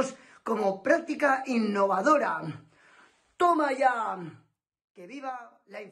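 No technical faults are audible.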